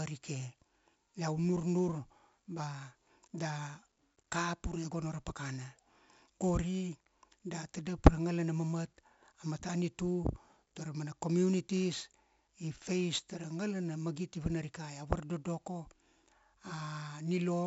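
Throughout the speech, 4-bit ADPCM compression leaves a gritty hiss that swells and fades with the level, with roughness on sharp attacks. Nothing sounds above 7.7 kHz, which fits 64 kbps at 16 kHz. Unlike perceptual codecs, there's no swirling or warbling, just level-following noise.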